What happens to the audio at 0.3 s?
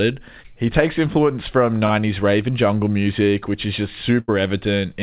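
Nothing goes wrong at 0.3 s: the speech comes through intact, with only the call path's usual narrowband character, nothing above about 4 kHz, which fits a 64 kbps G.711 A-law connection.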